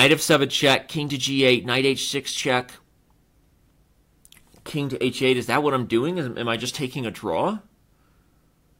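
No technical faults can be heard in this audio. Nothing in the sound points to a problem at any moment.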